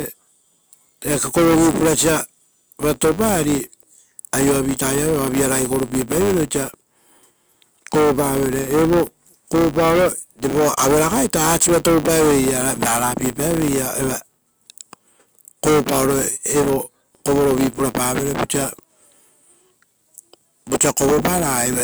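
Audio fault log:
throughout: filter restarted on every block. The filter discards its stored state at each block boundary and starts from silence, so every block opens with a small transient. With blocks every 10 ms, these clicks fuse into a 100 Hz buzz that rises and falls with the speech level.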